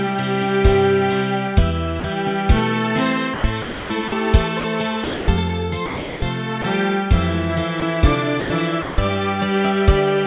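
The sender's voice detector likely misread brief stretches as background and stopped sending, so the sound dropped by the voice detector gives way to synthetic comfort noise for about 40 ms at 2.00–2.04 s and 20 ms at 7.80–7.82 s. In three longer stretches the detector likely toggled repeatedly, producing sound chopped by the voice detector at 3.34–5.28 s (about 700 ms replaced), 5.86–6.64 s (380 ms) and 8.40–8.98 s (260 ms). Across these stretches the audio turns choppy. The call path cuts everything above 4 kHz, which fits G.711 A-law at 64 kbps.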